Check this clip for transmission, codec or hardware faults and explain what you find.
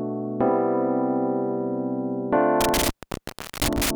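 There is one hardware fault: an intermittent contact between 2.61 and 3.91 s. A loose cable or plug breaks the connection, and the line stays open for about 0.72 s in total. The sound drops out with crackle at each edge, leaving faint hiss. A waveform shows near-flat gaps bounded by sharp spikes. A spectrogram shows broadband vertical streaks around dark, empty stretches.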